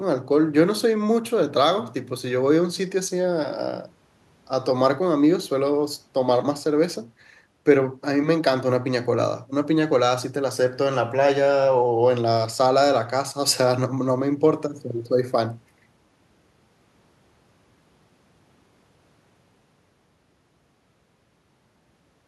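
Nothing goes wrong anywhere in this speech recording, so there's no fault to point to at any moment.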